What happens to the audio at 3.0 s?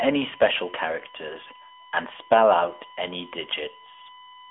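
At 3.0 s, a steady USB whine sits under the speech, as it does through the whole clip. It is a fixed tone at 1 kHz, roughly 25 dB below the speech. The USB bus draws current in regular 1 ms frames. That pulsing leaks into the audio through the power or ground lines. The result is a thin, constant pitch that never shifts with what is said.

The speech at that moment is also squeezed through the AMR narrowband mobile codec, and this too lasts the full clip. The band runs from about 300 Hz to 3.4 kHz, and nothing passes above 3.6 kHz. The codec models the voice as a vocal-tract filter fed by a few pulses per frame. At this bit rate, which fits roughly 10 kbps, the damage is plainly audible: the voice sounds muffled, buzzy and somewhat synthetic.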